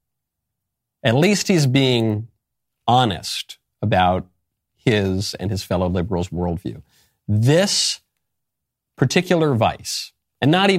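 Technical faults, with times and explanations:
Nothing stood out as a technical problem on listening to this recording.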